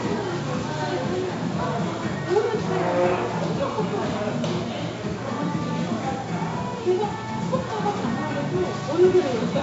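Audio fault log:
throughout 4-bit ADPCM compression: a gritty hiss rides on every loud sound and sharp attacks distort. This fits a 64 kbps ADPCM stream. Nothing sounds above 7.7 kHz, so the top is dull. Unlike perceptual codecs, the noise tracks level without swirling or warbling.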